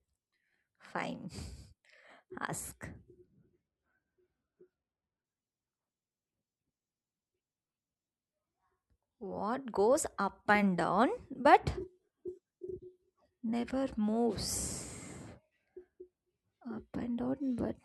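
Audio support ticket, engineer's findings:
Adaptive stream at a lower bitrate, 3.24–5.24 s: speech abruptly turns swirly with codec artefacts, no gap at either switch. Probable component: player's adaptive bitrate logic. Drop consistent with falling from about 128 kbit/s MP3 to roughly 20 kbit/s during a throughput dip.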